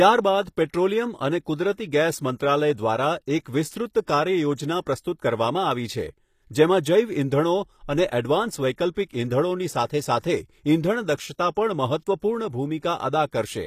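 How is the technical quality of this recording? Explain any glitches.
The speech carries plainly audible codec damage throughout, plus two brief pre-echo smears around the 9-second mark.

Across the whole clip, s sounds come out gritty and metallic, and nothing is present above 14.9 kHz. The likely cause is HE-AAC compression at a bitrate in the region of 24 kbps. The treble is rebuilt by copying lower bands upward rather than being coded, so its harmonics don't line up across the crossover. Unlike plain low-pass filtering, the top stays bright but sounds synthetic.

Pre-echo appears at 8.94 to 8.97 s (about 29 ms) and 9.09 to 9.11 s (about 21 ms). Each time, a short hiss leads into a sharp attack. The codec spreads quantisation noise across the whole transform block, so noise scaled for the loud onset also fills the quiet moment before it. The hiss comes before the attack, which sets it apart from a click or a reverb tail that follows the event.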